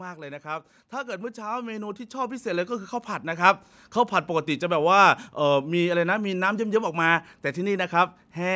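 Automatic gain rising runs from 0.42 to 4.57 s in this speech recording: the gain control judged the input too quiet and lifted it by about 14 dB, so voice and background swell together. The call microphone processing leaves nothing above 8 kHz.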